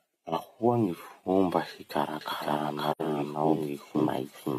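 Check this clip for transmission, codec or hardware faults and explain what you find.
Two faults are audible in this speech clip, both from about 2.2 s onward.

From 2.21 s to the end, there is a doubled audio track. A second full-band copy of the speech sits roughly half a second behind the original, at about the same level. It starts abruptly and has no decay or room colouring. This likely comes from the signal being picked up again through a slower path, or from an edit leaving two copies out of step. The result is a clean, flat echo of every syllable for the rest of the clip.

From 2.91 s to 3.01 s, there is an AAC frame loss with muting, a gap of about 85 ms, which fits two lost frames. The decoder had no data for that stretch and filled it with silence. Its overlapping transform windows then faded the sound down into the gap and back up out of it. The result is a short dropout with softened edges.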